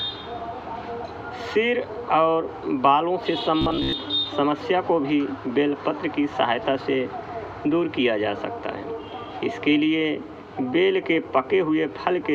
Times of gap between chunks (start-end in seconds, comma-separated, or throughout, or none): none